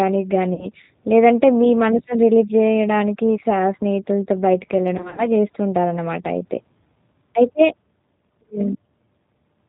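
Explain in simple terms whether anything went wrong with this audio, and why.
The whole speech clip has passed through the G.729 codec, a low-rate phone codec that rebuilds the voice from a simplified model of the throat and mouth plus a few pulses every few milliseconds. It discards everything above 4 kHz, so the voice sounds muffled and thin, and the rough, slightly synthetic texture is plainly audible throughout. The words stay understandable, but the natural detail of the voice is gone.

There are also two moments of VoIP packet loss concealed by the speech codec. From 0.54 to 0.67 s, about 40 ms of audio never arrived. The decoder filled the hole by stretching the last bit of voice it had, which turns into a short buzzy or noisy smear that fades. From 4.98 to 5.27 s, the losses total 100 ms, scattered across 200 ms with no single gap longer than 40 ms, so the voice goes weak several times. 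It stays rough briefly after each gap because each new stretch of sound is built from the damaged one before it.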